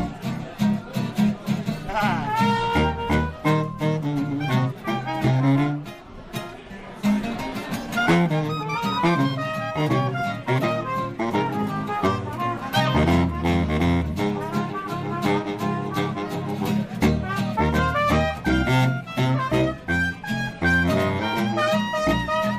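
The signal stays technically intact throughout, with nothing in the audio pointing to a fault in how it was captured, processed or delivered.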